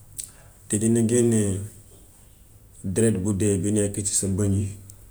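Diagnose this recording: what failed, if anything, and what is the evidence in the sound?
Nothing in the speech points to a failure anywhere in the chain, with the signal continuous and intact from the first syllable to the last.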